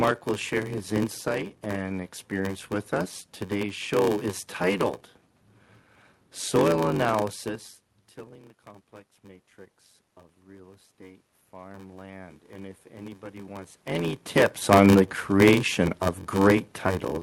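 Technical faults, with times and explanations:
throughout: block size mismatch (padded). A steady buzz at 93.8 Hz rides under everything, and the sound runs at 0.861 times normal speed with its pitch about unchanged. One stage hands over blocks shorter than the next stage reads, which fits a 512-sample read block, and the shortfall in each block is filled with zeros. The resulting silent gaps repeat at the block rate and drag the playback slower. On a waveform, near-silent stretches recur at regular intervals. On a spectrogram, thin vertical gaps repeat evenly, and a harmonic comb appears on 93.8 Hz multiples.
9.21–13.85 s: automatic gain rising. After "tilling the complex", the input level drops by about 21 dB, and the gain control gradually raises its gain by about 10 dB until just before "any tips on the". Because the boost is applied to everything, the background noise swells along with the voice over several seconds instead of jumping at once. 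On a waveform the envelope widens slowly across the span. On a spectrogram the noise floor between sounds brightens in step with the louder passages.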